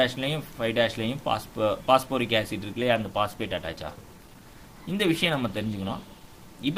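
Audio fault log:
2.72 s to the end, adaptive stream at a lower bitrate: the quality drops abruptly with no gap, and codec smearing comes in. It sounds like the stream stepped down from something like 64 kbit/s Opus to roughly 16 kbit/s.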